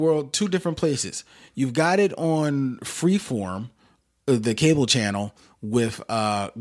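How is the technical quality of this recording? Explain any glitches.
No glitches turn up anywhere in this recording. The speech continues without any audible interruption or defect that would need explaining.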